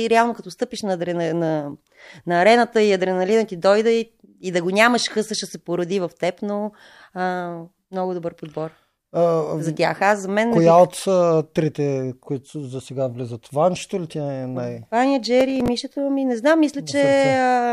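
From 15.41 to 15.68 s, processor overload crackle: several buffers of a few milliseconds miss their deadlines and replay stale audio, giving gritty tearing, seen as vertical broadband streaks and hard waveform discontinuities.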